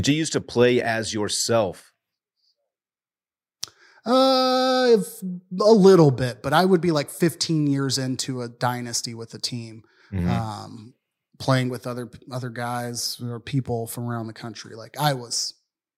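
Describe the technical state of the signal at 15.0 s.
At 15.0 s the speech carries faint, evenly spaced ticks, one roughly every third of a second, part of a run of clock slip clicks lasting from 0.43 s to 15.67 s. Each tick is a single sample dropped or repeated where the signal jumps. The likely cause is two devices running on unsynchronised clocks about 70 ppm apart, so the drift reaches a whole sample at a steady interval and the stream slips.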